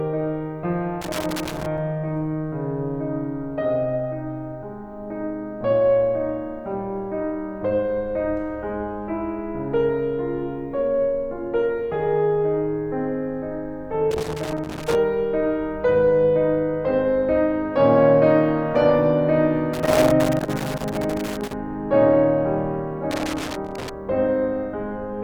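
A music clip with loose connector crackle, irregular scratchy bursts at 1.0–1.8, 14.1–14.9, 19.7–21.5 and 23.1–23.9 s, where a worn contact keeps making and breaking.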